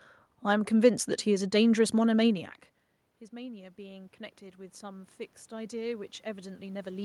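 Automatic gain rising from 3.29 s to the end: after the input falls about 21 dB, near where the talker moves back, the gain slowly climbs, swelling speech and room noise together.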